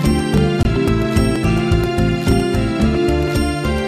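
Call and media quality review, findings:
Audio missing between chunks: short skips at 0.38, 0.88, 1.36, 1.84, 2.32, 2.80 and 3.28 s, repeating about every half second. Each drops roughly 20 ms, and the two sides are butted together with no silence, so the sound jumps forward rather than pausing. Likely component: a recorder or processing stage working in 0.5 s blocks, losing a sliver at each block handover while closing one buffer and opening the next.

Bluetooth stall: one brief dropout to silence at 0.63 to 0.65 s, 21 ms long, after which the sound resumes. Unlike the chunk skips, this one is an actual gap rather than a splice. Likely component: the Bluetooth link to the headphones. Interference delayed packets, the headset buffer underran, and playback halted until retransmitted audio arrived.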